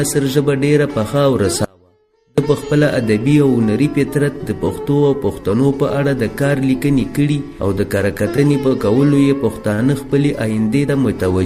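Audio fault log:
1.65–2.38 s, audio dropout to a faint residue: the sound cuts abruptly for about 0.73 s, leaving only a faint trace roughly 35 dB below normal level. The likely cause is the signal being lost while the path after the break stayed live, so the gap is not silent.
8.36 s, 8.68 s and 9.74 s, short stall from a late packet: the sound is held too long each time, for 16 ms, 30 ms and 48 ms. With nothing missing, this points to a jitter buffer running dry and stretching the last sound until the late packet arrived. The playback delay grows with each stall.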